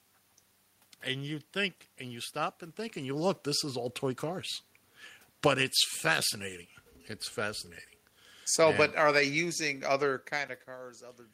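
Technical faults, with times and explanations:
5.3 to 5.62 s, automatic gain falling: the level drops by about 5 dB over roughly a third of a second, as the gain control decides the input is too hot and pulls its gain down. The room noise sinks in step with the speech, which separates this from the talker shifting position around 2.5 s, where only the speech level changes and the background stays put.
5.54 to 6.22 s, automatic gain rising: overlapping the end of the dip, the gain control reverses and lifts its gain by about 4 dB over roughly 0.7 s, so speech and background swell back up together. The recovery is slower than the drop and falls about 1 dB short of it. Unlike the talker moving again near 10 s, the room noise rises along with the speech.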